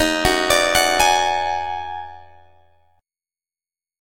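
Overlap-add ripple throughout: unevenly overlapped frames swing the level about 11 dB roughly 100 times a second, a metallic buzz with extra tones around each note, pitch untouched unlike vibrato.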